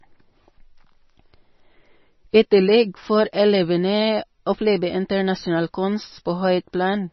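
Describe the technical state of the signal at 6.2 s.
At 6.2 s the speech carries heavy MP3 compression damage, present across the whole clip: nothing survives above 5.9 kHz, likely from a low bitrate near 24 kbps that forced a treble cut and dropped weak bands. It sounds watery and swirly, with smeared consonants. A spectrogram shows a hard ceiling at 5.9 kHz and patchy, flickering holes below it.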